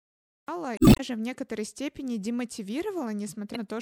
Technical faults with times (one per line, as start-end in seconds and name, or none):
0.00-0.48 cut-off start
0.75-1.00 damaged data in a compressed stream
3.52-3.56 damaged data in a compressed stream